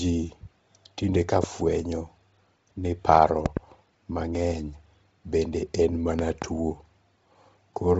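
From the start the speech sounds breathy and grainy, with nothing above 7.8 kHz, which fits heavy Bluetooth LC3 compression at around 24 kbps in 7.5 ms frames, likely zeroing and noise-filling the upper band. Loud pops, roughly 15 dB above the speech, land at 1.44–1.46 s just after "tinde ka", as a doubled pop at 3.46–3.59 s, and as another pair at 6.19–6.44 s after "bende en". These are likely voltage spikes from a switch or driver glitch.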